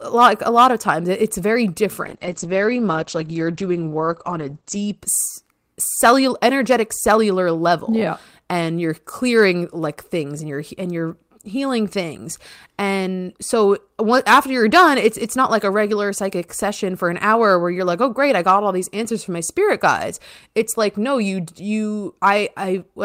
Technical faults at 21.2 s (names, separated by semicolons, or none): none